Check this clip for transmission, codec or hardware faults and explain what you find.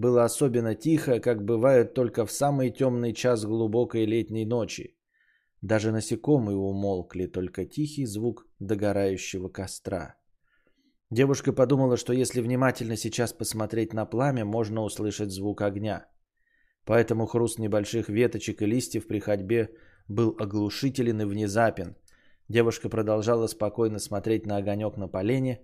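No faults turned up when I checked the clip, so there is nothing to explain.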